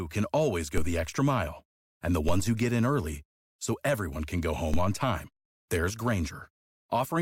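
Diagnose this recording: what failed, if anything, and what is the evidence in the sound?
DC steps at 0.78 s (between "can always" and "the extra mile and"), 2.29 s (just before "ones who get in") and 4.74 s (between "so everyone can go" and "on time there's"). Each is a low thump where the waveform's zero line suddenly jumps by about -18 dBFS, then drifts back as a roughly 2 Hz high-pass bleeds the offset away. The speech continues unaffected, pointing to the converter or analogue input stage recalibrating or switching in an offset.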